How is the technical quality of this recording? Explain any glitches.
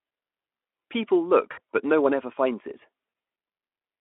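The recording has two short glitches from VoIP packet loss concealed by the speech codec, heard over a narrowband Speex line with light coding damage. They fall at 1.51 to 1.59 s and 3.09 to 3.13 s, covering about 60 ms and 40 ms of lost audio. The decoder filled each gap by extending its last pitch and spectral shape at falling gain, so the speech smears into a brief buzzy tone or coloured noise that fades, and sounds weak just after.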